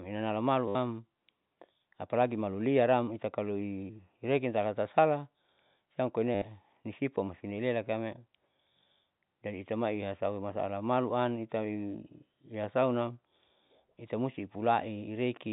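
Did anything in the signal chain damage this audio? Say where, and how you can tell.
Yes, at the network stage: two bursts of packet loss with last packet repeated, at 0.68 to 0.75 s and 6.35 to 6.42 s, each about 70 ms long. The receiver replayed the final good packet, so each gap is a brief robotic stutter with a buzz near 100 Hz, which fits 10 ms packets. On a waveform, identical short segments repeat with a step at each join. A spectrogram shows horizontal harmonic bands below the G.711 telephone cut-off at 4 kHz.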